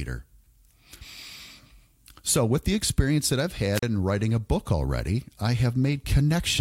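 At 3.73 s, just after "the experience that I've", hiss briefly swells, the speech drops into a near-silent hole of about 36 ms, and it returns by 3.83 s before "in writing a book". This is a wireless microphone squelch dropout: the FM radio link faded and the receiver's squelch muted its output.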